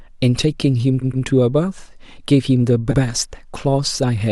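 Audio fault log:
1.01–1.25 s, repeated frames: a block of about 120 ms plays twice more in a row, a stutter that adds 240 ms. The same compressed frames reached the decoder again.
2.91–2.99 s, repeated frames: an 80 ms block repeats once, a shorter stutter that adds 80 ms.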